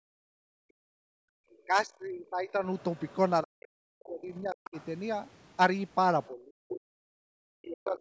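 From 0.0 to 4.76 s the talker's speech is repeatedly pulled down, in total about three seconds of it. This is speech suppressed in double talk. The dips are deep, around 40 dB at worst, and the voice thins or drops out in pieces. The likely cause is an echo canceller that could not tell the near talker from loudspeaker echo while both sides spoke, so it cut both.

At 1.53 to 1.58 s a faint scrap of the other side's voice leaks through, roughly 35 dB below the speech. A longer stretch follows from 2.5 to 4.87 s, somewhat louder, around 25 dB down. This is residual echo. The likely cause is the far-end voice playing on the talker's loudspeaker and not being fully removed from the microphone.

From 6.24 to 7.99 s the leak is strong, only about 10 dB below the speech. From 6.28 to 7.99 s the suppression returns, with drops again near 40 dB and about one second affected. The two overlap, so the far voice competes with a chopped, ducked near voice. 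The likely cause is the same double-talk failure. The call's microphone processing, which carries nothing above 8 kHz, is not a fault.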